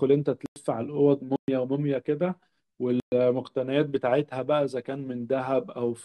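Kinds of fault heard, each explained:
Block of digital silence: at 0.46, 1.36 and 3.0 s the speech drops abruptly to silence for 100, 120 and 120 ms. Each block of samples is blanked with no fade, so each gap sounds like a short hole.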